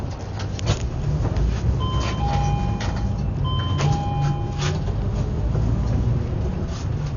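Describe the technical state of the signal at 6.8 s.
At 6.8 s, as throughout, the sound carries heavy damage from likely Dolby Digital compression at a starved bitrate, fitting about 48 kbps. Nothing survives above 6.9 kHz, and unfunded frequency lines become dither noise, so it sounds dull and fluttery.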